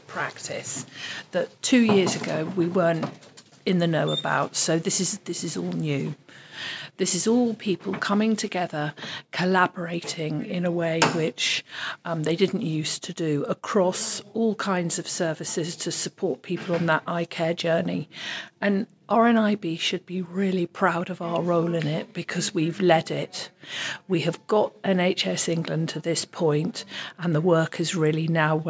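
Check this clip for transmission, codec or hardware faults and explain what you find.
Nothing stood out as a problem when listening to this clip.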